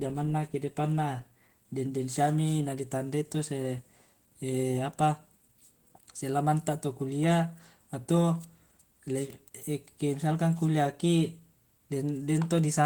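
From start to finish the speech carries a plainly audible coarse, slightly hoarse and robotic grain, though the band still reaches about 20.1 kHz, so it is not dulled. This is Opus voice compression in hybrid mode: a linear-prediction coder handles the voice below 8 kHz with a roughly quantised excitation, while a transform layer covers the upper band. The roughness points to a low rate of around 16 kbps, coded in 20 ms frames.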